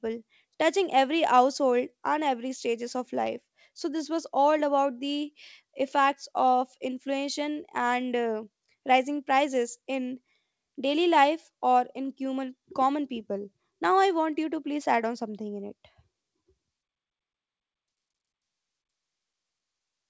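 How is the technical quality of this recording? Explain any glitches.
The technical quality of this recording holds up, with no glitches to explain.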